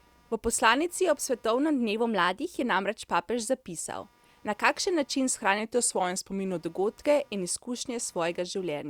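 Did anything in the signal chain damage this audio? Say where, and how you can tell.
Yes. Computer activity noise runs throughout: a buzz pulsing at around 200 Hz, roughly 35 dB below the speech, as processor load disturbs the analogue wiring's shared ground.

Drift correction steps occur at 1.97–2.47 s (6.1% faster, 103 cents sharp) and 5.59–6.60 s (6.1% slower, 109 cents flat), likely buffer clock-matching changing playback rate.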